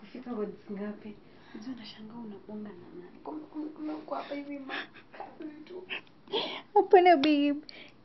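A speech recording, and nothing is technically wrong with it.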